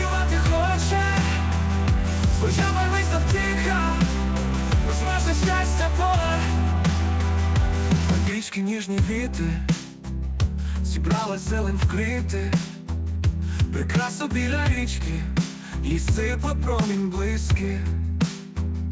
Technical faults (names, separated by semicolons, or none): none